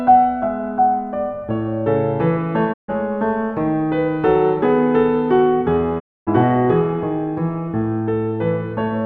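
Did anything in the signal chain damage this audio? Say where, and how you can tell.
Yes. The music shows a digital broadcast dropout at the reception stage, twice: from 2.72 to 2.90 s and from 5.98 to 6.29 s. Each time the sound fades to silence over 20 ms, stays muted, then resumes later in the programme, with the missing material gone rather than delayed. That points to a receiver muting on lost or corrupted frames. The 144 ms and 264 ms gaps fit runs of about six and eleven 24 ms frames.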